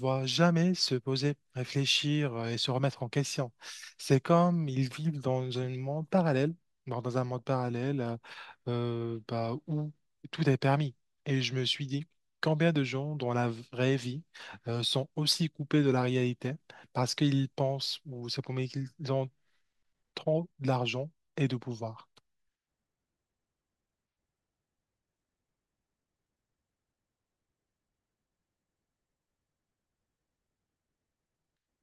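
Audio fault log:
No faults heard at any point in the speech recording.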